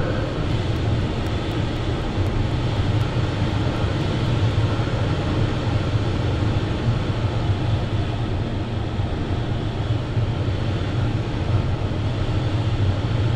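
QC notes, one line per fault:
0.27–4.51 s, periodic USB or driver dropouts: every 0.25 s a brief gap of about a millisecond drops to silence, around twenty in all, as something stalls the audio path on a fixed cycle, giving evenly spaced ticks heard only against signal.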